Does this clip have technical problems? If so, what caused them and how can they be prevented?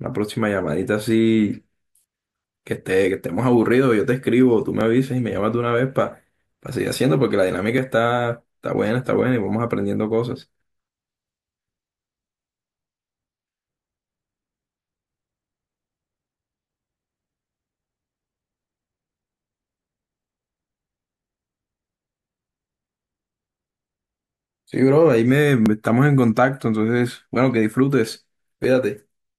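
Yes: a click every 3 s from 1.83 to 28.64 s, likely clock drift buffer slips, with clocks around 500 ppm apart dropping or repeating about 70 samples each time. Lock both devices to one shared clock.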